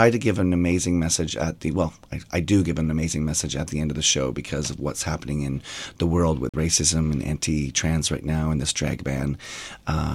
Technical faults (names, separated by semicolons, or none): Bluetooth dropout